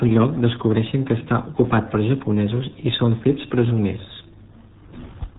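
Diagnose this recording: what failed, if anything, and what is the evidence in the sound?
Codec stage: RealAudio 14.4 codec throughout, the speech heavily gargled and muffled with nothing above 3.8 kHz, which points to a starved 8 kbit/s stream.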